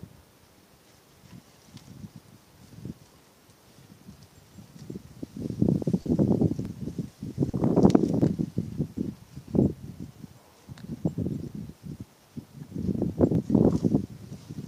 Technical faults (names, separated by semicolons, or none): short concealed packet loss; DC step